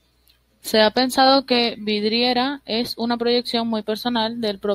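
Speech with no audible faults.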